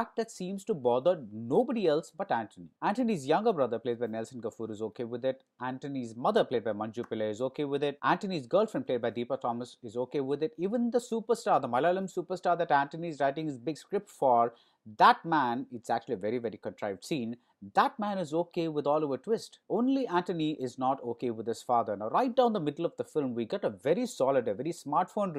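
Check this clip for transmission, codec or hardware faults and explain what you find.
No transmission, codec or hardware faults can be heard anywhere in the audio; the signal stays continuous and intact throughout.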